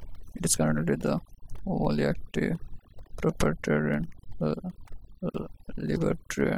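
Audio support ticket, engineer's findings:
Overdone noise removal, present throughout. Background between phrases drops and breaks up into twinkling specks (musical noise). Speech low-level detail and decays missing. Probable component: noise reduction stage set too aggressive. Mechanism: bands near the noise estimate gated down or off frame by frame, taking quiet speech energy with them. Recommend reducing suppression depth or reprocessing from the unprocessed source.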